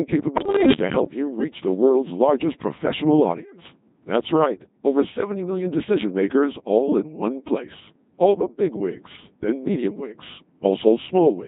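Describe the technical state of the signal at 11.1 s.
At 11.1 s the speech sounds robotic and buzzy, as it does across the whole clip. This is Codec 2 vocoder damage, heavy here and consistent with the 2.4 kbit/s mode: only pitch, voicing, energy and spectral envelope survive, and the decoder rebuilds the voice from sine waves.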